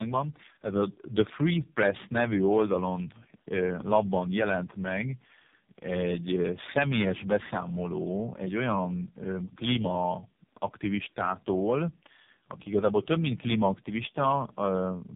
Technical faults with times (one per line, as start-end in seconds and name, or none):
0.00-15.16 tandem speech coding